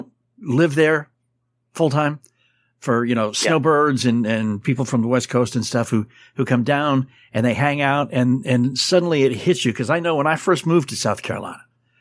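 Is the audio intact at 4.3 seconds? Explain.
Yes, the speech at 4.3 seconds is intact, with no dropout, click, distortion or other fault at that moment.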